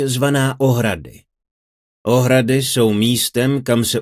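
No dropout, glitch, distortion or other technical fault can be heard anywhere in the audio.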